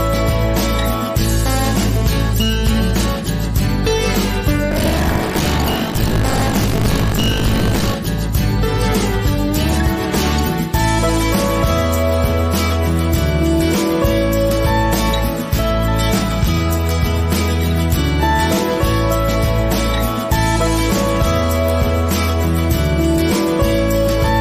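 From 4.7 s to 7.95 s the audio carries a robotic 50 Hz buzz, the sound of buffer tearing. The writer and the hardware reader of the ring buffer have drifted out of step and cross inside each period, so roughly a third of every buffer replays audio from around 70 ms earlier, with hard splices at both edges. The 50 Hz rate points to a period of about 20 ms, and the rattle is present only while there is signal.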